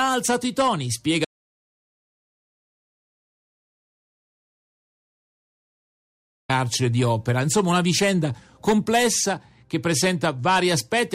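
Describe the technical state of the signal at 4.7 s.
At 4.7 s the signal sits inside an audio dropout to silence running from 1.25 to 6.49 s, about 5.2 s lost. The input was likely cut while recording continued writing silence, so the sound stops abruptly into dead silence without room tone. The waveform is a flat line, the spectrogram an empty black block.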